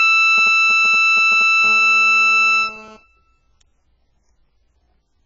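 Throughout the music the sound is dull and smeared, with a warbling, fizzy texture on sustained tones and nothing above 7.7 kHz. This heavy damage is likely AAC compression, AAC-LC quantising coarsely at a bitrate that fits roughly 12 kbps, cutting the top band.

From 0.38 to 1.66 s a galloping dit-dit-dit of short 217 Hz buzzes sits around 20 dB under the music. These are GSM signalling bursts: a nearby 2G phone sending brief groups of radio bursts, which the audio circuit rectifies into audible pulses.

From 1.67 to 2.97 s a steady, hard, raspy buzz at 217 Hz with many harmonics runs about 26 dB below the music, unrelated to it. This GSM phone buzz comes from a 2G phone in a call transmitting 217 bursts a second, rectified by the audio circuit.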